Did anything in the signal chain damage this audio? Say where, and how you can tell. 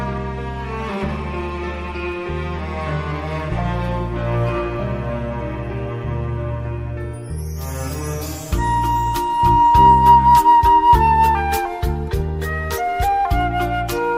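No, nothing in the signal chain stood out as damaging this audio on listening.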